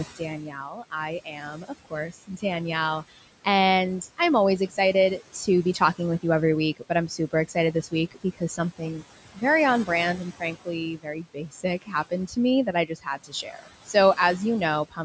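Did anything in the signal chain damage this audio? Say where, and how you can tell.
Yes. The noise suppressor in the call-processing stage leaves noise suppressor artifacts throughout. It cuts the room noise, which sits about 17 dB below the speech, by about 17 dB frame by frame. The background sinks in the pauses and returns under the speech.

The same suppressor also cut speech it mistook for noise, at 0.16–0.93 s, 1.25–2.44 s, 5.19–6.24 s, 6.77–9.04 s, 10.4–14.18 s and 14.89–14.99 s. Brief dips of about 9 to 19 dB turn parts of the speech down with the background so they sound swallowed, most heavily across the 10.4–14.18 s stretch.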